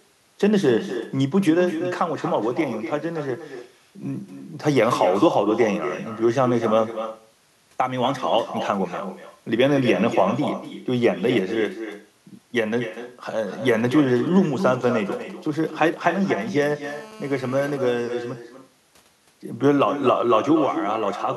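From start to finish, the speech carries echo with no canceller. The far end's loudspeaker feeds back into its microphone, and nothing subtracts that pickup, so every phrase returns roughly a fifth of a second later, about 9 dB below the direct speech, and thinner. On a spectrogram each syllable has a fainter duplicate offset to the right by that gap. In the waveform, onsets are followed by a smaller repeated envelope.

From 13.65 s to 16.73 s there are GSM signalling bursts. A nearby 2G handset is exchanging short control transmissions rather than carrying a call, and the audio circuitry rectifies those radio pulses into the signal. At around 20 dB under the speech, the result is an irregular galloping tick-tick-tick with brief 217 Hz buzzes. A spectrogram shows intermittent clusters of vertical stripes and short stacks of harmonics on a 217 Hz spacing. In the waveform, the clusters appear as sharp-edged packets.

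From 16.84 s to 17.77 s comes a continuous GSM phone buzz. The handset has moved into call mode and transmits at its steady 216.7 Hz frame rate, which the audio stage demodulates into a hard, rasping tone about 21 dB below the speech and unrelated to it. On a spectrogram this shows as an unbroken ladder of harmonics spaced 217 Hz apart, reaching high in frequency. The waveform shows a regular comb of square-edged pulses for just under a second.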